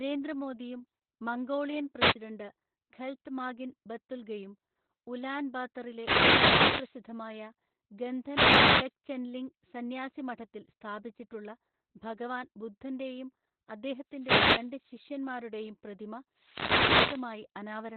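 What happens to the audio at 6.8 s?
At 6.8 s you're right at the tail of a wireless microphone noise hit that runs from about 5.87 s to 7.01 s. What's happening is the radio link from an analogue FM mic dipping into a fade, where reflected copies of the signal cancel the direct one. As the carrier weakens, the receiver's own noise rises, so over that stretch you get a swish of static before the signal recovers just after 7 s.

Underneath that, and across the whole clip, there's Opus voice compression running in its SILK mode at narrowband. The speech is cut off at about 4 kHz, and the coarse excitation coding leaves it muffled, hoarse and a bit robotic. That level of damage fits a bitrate of roughly 8 kbps.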